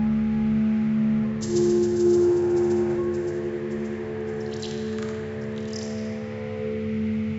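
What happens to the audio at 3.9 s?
Nothing goes wrong at 3.9 s; the audio runs through that moment intact, with no dropout, click or other fault to be heard.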